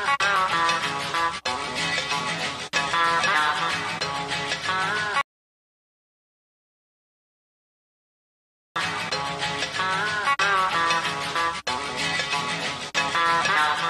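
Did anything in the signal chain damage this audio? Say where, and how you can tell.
Yes. An audio dropout to silence runs from 5.21 s to 8.76 s, about 3.5 s of lost signal. The sound cuts off abruptly mid-flow and returns just as abruptly, and the gap between is silent with no room tone or noise floor underneath. That points to the capture end: the input was most likely lost at a disconnected device, a failed link or a mute, while the recorder kept writing empty samples.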